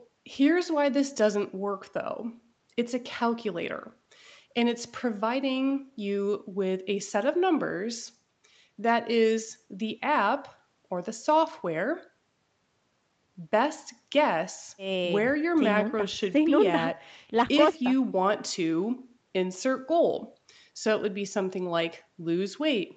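Speech recorded over a call, with nothing technically wrong to point to at any moment.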